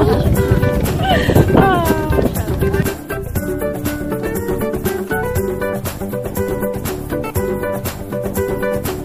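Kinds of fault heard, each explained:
No kinds of fault are heard in this clip, so there is nothing to explain.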